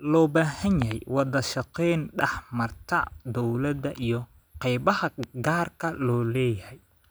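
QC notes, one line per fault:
0.82–0.93 s and 5.23–5.49 s, loud pop: a sharp double pop each time, about 15 dB then 10 dB over the speech. Likely a voltage spike from a plug, switch or static.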